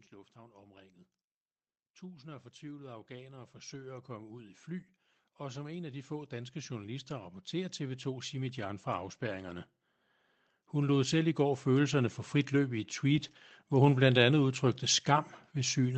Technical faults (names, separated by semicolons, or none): automatic gain rising; lost packet rebuilt from error correction